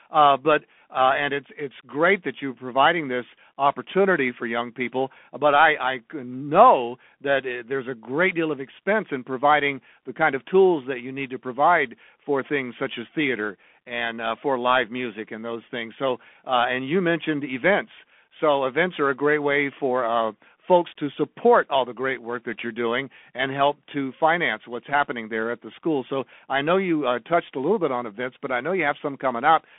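From start to finish, the speech carries Bluetooth CVSD headset codec damage. A one-bit delta coder's adaptive step falls behind loud high sounds, so s sounds turn scratchy over a granular hiss. A spectrogram shows energy confined to about 250 Hz to 3.5 kHz, with nothing above 3.8 kHz.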